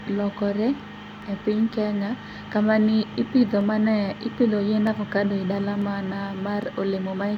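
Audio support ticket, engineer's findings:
Five sharp single clicks in the speech at 1.22, 3.61, 4.87, 5.82 and 6.63 s. Landmarks: 3.61 s just before "mane ipidho yiend avokado"; 4.87 s between "kamaniipidho mane ipidho yiend" and "avokado e dalani mana"; 6.63 s right after "avokado e dalani mana". Likely dropped samples: a fraction of a millisecond lost each time. Waveform jumps to a later value. Thin vertical line in spectrum. No audible gap.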